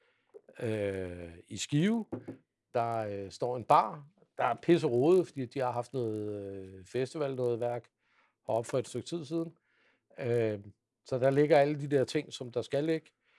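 Throughout the clip, the speech carries a buzz at 50 Hz, present only while there is signal: the resampler restarted on every block. Each 20 ms block was converted from 48 kHz to 24 kHz in isolation, so the filter lacked true neighbouring samples at every edge and left a small error there. On a waveform, tiny discontinuities recur every 20 ms during speech; a spectrogram shows faint vertical lines at that spacing, absent in pauses.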